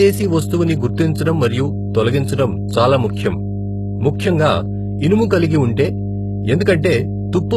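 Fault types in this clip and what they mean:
Mains hum: A steady 50 Hz tone from power-line coupling runs under the whole speech clip, sitting only about 5 dB below the speech.
HE-AAC compression: Heavy codec damage is heard, likely from low-bitrate HE-AAC with copied treble. Nothing is present above 12.3 kHz, and the treble is rebuilt rather than original.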